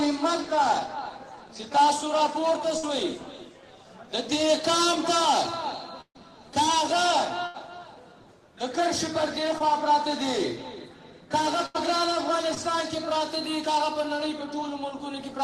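At 2.77 to 2.85 s the sound stretches into a held buzz or fading hiss for 56 ms, then jumps ahead with about 60 ms of audio gone. This is a burst of packet loss: packets were lost or arrived too late, so the receiver extended and faded the last sound.

The same happens at 6.01 to 6.17 s, with a 137 ms fill that dies into about 70 ms of silence and 140 ms missing. It recurs at 7.47 to 7.56 s (75 ms filled, 80 ms missing).

At 9.58 to 9.62 s a brief smear or wobble replaces 20 ms of audio. This is short concealed packet loss: a 17 ms fill continued the preceding sound, then blended back.

At 11.66 to 11.76 s another burst fills 85 ms where 80 ms is lost. At 12.54 to 12.58 s a second short concealed loss smears over 20 ms.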